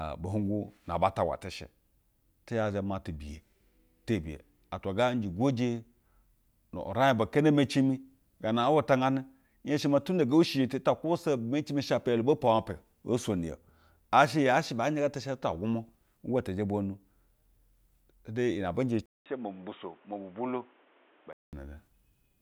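Speech, and at about 19.06 s the sound drops out for roughly 0.2 s, then comes back dull and boxy, with nothing above 3.8 kHz, a bit quieter and carrying a new noise sitting fairly far under the talker. That band limit and fresh noise floor point to the input switched to a poorer device, likely a second mic or headset call profile. Full bandwidth returns at about 21.53 s.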